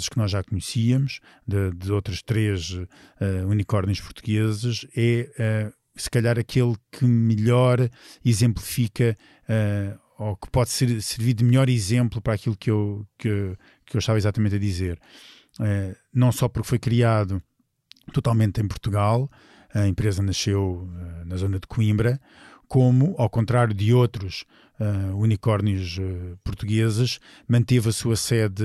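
Nothing in this speech recording stands out as a technical fault, so there's nothing here to flag.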